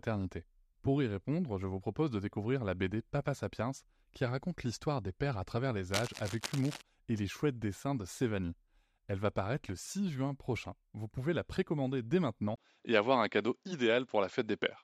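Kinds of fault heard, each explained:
Cable scratch noise: From 5.86 to 6.82 s, between "des pères à travers" and "et les chouettes dessins", dense, uneven scratching rides over the speech at roughly 10 dB below it, likely from a worn cable or connector whose contact resistance flickered as it moved.
Input switched to a poorer device: At 12.56 s, right after "pouvez la précommander dès", a 20 ms gap precedes a duller sound with nothing above 7.6 kHz, a level shift of around 5 dB and a faint new noise floor, likely from a change to another microphone.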